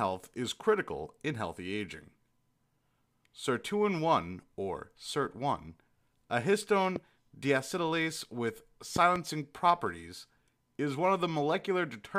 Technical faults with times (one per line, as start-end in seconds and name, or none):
6.96-6.98 loud pop
8.96-9.18 loud pop